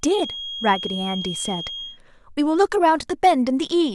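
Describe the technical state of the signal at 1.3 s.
A feedback whistle spans 0.0 to 2.0 s: a single-pitch 3.3 kHz tone about 10 dB below speech, likely a loudspeaker-microphone loop held short of runaway.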